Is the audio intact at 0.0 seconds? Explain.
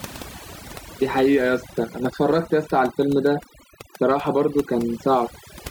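No. At 0.0 seconds the speech already carries overdone noise removal, and it runs through the whole clip. The noise reduction was set so aggressively that frequency bands sitting near its noise estimate are pulled far down or cut out, taking the softer parts of the voice along. The background drops and breaks up into twinkling specks. On a spectrogram the gaps between words look blank except for scattered isolated dots, and the speech bands appear patchy.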